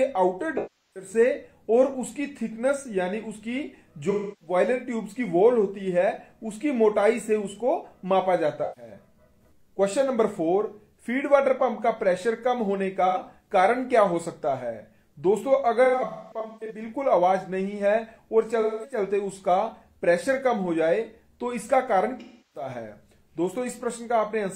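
AAC frame loss with concealment hits the audio seven times, at 0.57–1.10, 4.10–4.55, 8.63–8.91, 13.06–13.18, 15.84–16.84 (scattered gaps, longest around 200 ms), 18.61–18.97 and 22.19–22.69 s. Each time the decoder papers over the missing frames by reusing the last good spectrum, so you get smeared, noisy, phasey patches.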